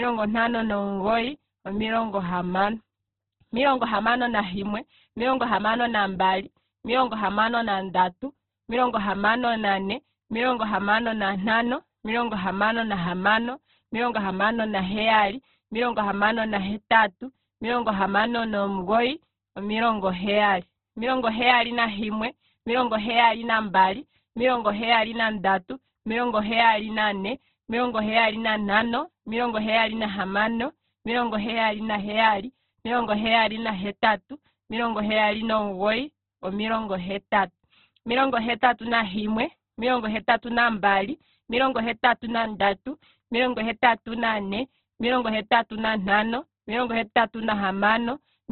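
Throughout, heavy Opus compression, likely near 12 kbps, removes everything above 4.2 kHz, leaving the speech muffled, narrow, grainy and rough.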